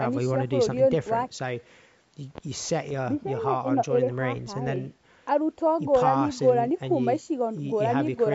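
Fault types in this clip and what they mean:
Bluetooth stutter: At 2.89 to 2.92 s a packet of about 14 ms goes missing on the wireless link, and the receiver replays its last buffered slice to cover the gap, so the speech gives a brief doubled hiccup before carrying on as if it had never paused. This fits a single lost packet. On a waveform the short repeated cycle shows as a copied segment. On a spectrogram it appears as a thin vertical seam, under the 8 kHz ceiling of the call band.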